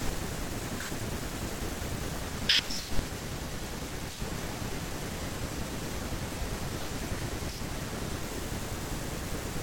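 Speech, with an adaptive stream at a lower bitrate from 2.22 s to 8.22 s. The treble suddenly turns thin, with nothing above 16.3 kHz, which fits a switch from AAC-LC near 96 kbit/s to HE-AAC near 32 kbit/s. Unlike a rebuffering stall, the sound never stops.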